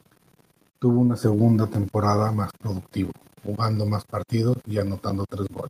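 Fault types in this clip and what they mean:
Microphone volume stepped up: the input gain jumps about 7 dB at 1.23 s, just before "temporada más productivo jugando", lifting voice and background together; waveform envelope and spectrogram brighten abruptly.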